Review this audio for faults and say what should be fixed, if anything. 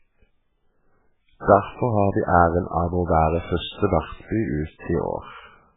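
Throughout the speech, the sound is dull and watery, with a swirling, metallic edge on s sounds and smeared consonant attacks, and nothing is heard above about 3.8 kHz. The likely cause is heavy MP3 compression at a very low bitrate, around 8 kbps. Starved of bits, the encoder cut the treble at a fixed point and dropped weak frequency lines, which flicker on and off between frames and create that swirl. To prevent it, encode from the original recording at a much higher bitrate, or keep the speech uncompressed.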